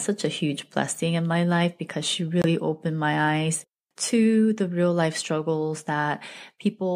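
Speech with a single short gap: from 2.42 s to 2.45 s the output drops to silence, then the talker continues further along, as though the audio kept running underneath. This is a Bluetooth dropout, likely caused by a packet arriving too late at the headphones and being discarded. About 23 ms of audio is missing, which fits the loss of one codec frame. Nothing was buffered to cover the missing span, so the output simply fell silent until the next good packet arrived.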